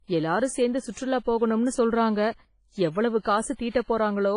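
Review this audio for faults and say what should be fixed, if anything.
WMA compression, throughout: the speech has a ringing, washy quality with hiss that swells with the signal and nothing above 10.1 kHz, likely from heavy WMA encoding at a low bitrate around 24 kbps.

Pre-echo, 3.20 to 3.25 s: a short hiss about 56 ms long leads a sharp attack because the codec's quantisation noise spreads back across the quiet start of the block.

To prevent both, encode from the original at a higher bitrate or with a codec that switches to short blocks on attacks.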